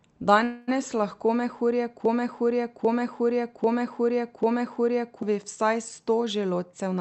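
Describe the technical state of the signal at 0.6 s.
At 0.6 s you're in the middle of a call audio freeze, running from about 0.43 to 0.70 s. The likely cause is packets stalling in transit so the jitter buffer ran dry. For roughly a quarter of a second the receiver stretches the last sound into a fading buzzy hiss. When the packets arrive, the audio picks up where it stopped. Nothing is lost, but everything after it lands about 0.24 s late.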